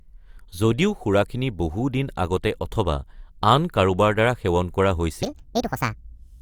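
From 5.23 s to the end, after "কাৰোবাৰ দ্বাৰা সেৱন কৰা", a section at the wrong speed runs 1.64 times fast and about ten semitones high, likely from a clock mismatch. On a spectrogram the harmonics leap upward.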